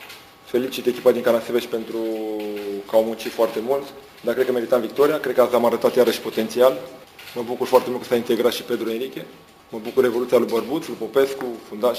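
Throughout the clip, the audio shows imaging from sample-and-hold upsampling. It was raised to a higher rate by holding each sample rather than interpolating, with no smoothing filter, and the first mirror band sits between 8 kHz and 16 kHz, which fits an original rate of 16 kHz. That folded copy, at about 23 dB below the signal, adds a bright metallic fizz that rises and falls with the sound and moves against its pitch.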